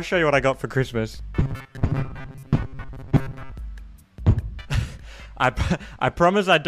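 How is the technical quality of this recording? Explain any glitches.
The recording has one clear glitch: robotic sound from repeated short buffers between 1.41 and 3.54 s. The audio becomes a rigid, metallic buzz pitched at 134 Hz, likely from the playback repeating a segment of about 7.5 ms whenever new data was late, with roughly half the real audio skipped.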